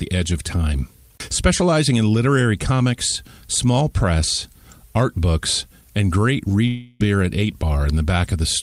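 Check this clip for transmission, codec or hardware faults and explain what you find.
One fault stands out: a long network dropout. From 6.67 to 7.02 s, just after "art books and great", the sound smears into a fading buzz for about a third of a second, then resumes with 320 ms of speech skipped. The likely cause is a break in arriving packets, which the receiver masked by stretching the last sound.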